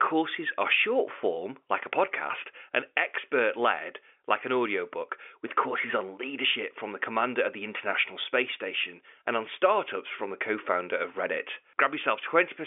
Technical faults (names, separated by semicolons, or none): none